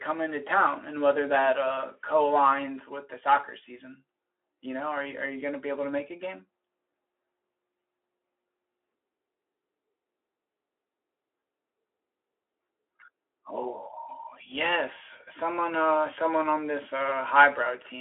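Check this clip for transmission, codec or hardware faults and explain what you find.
No faults turn up in this one: the speech comes over a Speex link at 15 kbps on a 300 Hz to 3.4 kHz line, and nothing in it points to a transmission, codec or hardware problem.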